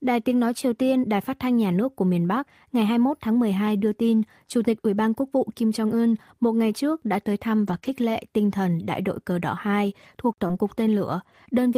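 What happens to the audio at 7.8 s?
Right after "trước đã tới thăm" the call hits a short run of packet loss. From 7.67 to 7.77 s (about 60 ms) you get a lost packet rebuilt from error correction. The decoder plays the low-bitrate backup copy carried in the next packet, so there's no gap, but that stretch sounds rougher and noisier. The length fits about three lost packets.

Then, between 7.79 and 7.83 s, a short concealed packet loss. About 20 ms never arrived, and there was no backup copy, so the receiver extended the preceding sound to fill the hole and blended back in. You hear a brief smear or wobble there.

From 7.83 to 7.89 s it goes back to error-correction copies for another 40 ms, again a bit grainy, before clean audio resumes at "lệ tinh thần đại".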